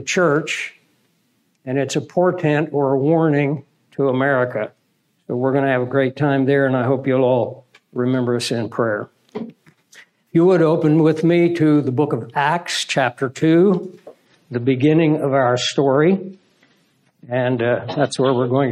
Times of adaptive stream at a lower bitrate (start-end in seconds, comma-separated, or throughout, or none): 14.26-18.71